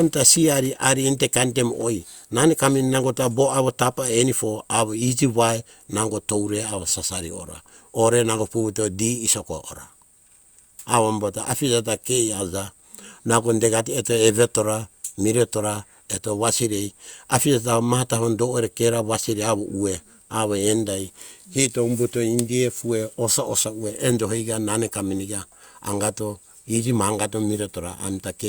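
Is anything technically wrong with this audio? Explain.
No, nothing technically wrong can be heard here.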